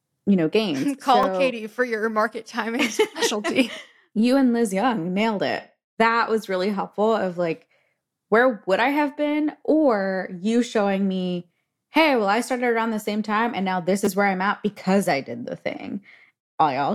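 Two repeated-buffer glitches turn up in this speech. At 1.23 s a tiny slice, about 5 ms, plays twice, so you just get a click. Around 14.05 to 14.07 s, between "time and now this" and "where I'm at because", the same slice loops four extra times, giving a brief buzzy stutter. Both times fresh audio didn't reach the device in time, so it replayed what it already held. The slice length suggests a buffer of roughly 5 ms, and about 20 ms of real audio drops out in the second glitch.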